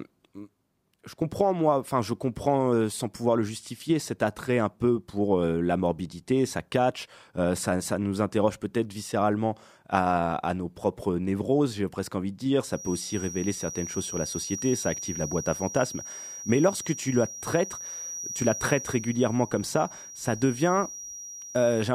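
A feedback whistle runs from 12.67 s to the end of this speech clip, a thin, steady 5.8 kHz tone that slowly swells and fades, roughly 15 dB below the voice, likely from a speaker-to-microphone loop held just short of runaway.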